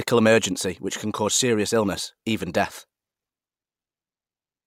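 Speech recording with no audible technical faults anywhere.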